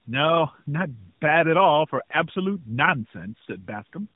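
From start to finish the speech sounds rough and muffled, with a warbly, watery edge, and nothing reaches above about 3.8 kHz. This is tandem speech coding: the signal appears to have passed through a narrowband mobile coder twice, which fits AMR-NB at 12.2 kbit/s, with an A-law G.711 link in between. Each conversion re-encoded the previous coder's already damaged output, so the artefacts stacked.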